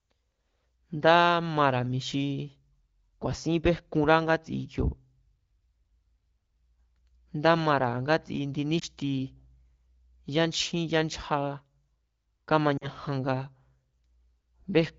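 At 8.79 to 8.84 s, just after "ngátsi indi", a lost AMR speech frame causes a brief warbling dip, not the hard click or silent gap of a plain dropout. At 12.77 to 12.88 s, two lost AMR speech frames make the voice fade to near silence before it returns weak or rough for a moment. The decoder replayed its last good settings at falling gain.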